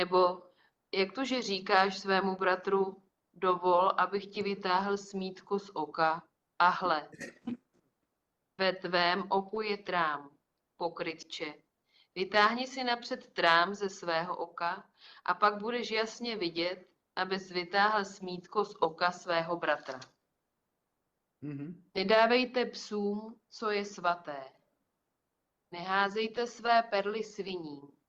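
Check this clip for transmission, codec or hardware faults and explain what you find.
Nothing to report; no faults can be heard anywhere.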